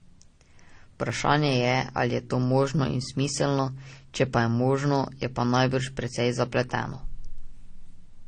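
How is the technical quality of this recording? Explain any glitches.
The recording has two faults: a codec-on-codec texture throughout and three tiny skips.

Transcoding between lossy codecs runs through the whole clip. The speech was likely encoded by one low-bitrate codec and then re-encoded by another, which fits an MP3-to-AAC chain at around 32 to 40 kbit/s. The second encoder wastes bits reproducing the first one's smearing and adds its own. Nothing survives above 9.8 kHz, so the speech sounds dull, with the two codecs' artefacts layered together.

Audio missing between chunks occurs at 1.10, 3.59 and 6.08 s, about 2.5 s apart. The capture or processing stage probably works in 2.5-second blocks and drops a sliver, well under 10 ms, each time it hands one block to the next. The two sides are butted together with no gap, so each boundary is heard as a brief jump in the speech, a tiny hiccup at a perfectly regular rhythm.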